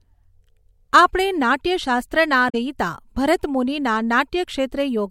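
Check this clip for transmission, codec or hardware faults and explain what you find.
There's one fault here: damaged data in the compressed stream, from 2.46 to 2.55 s. Some of the bytes in that stretch of speech were corrupted, so the decoder misread the frames, lost sync and hunted for the next good header. You hear it as a short glitch of about 90 ms.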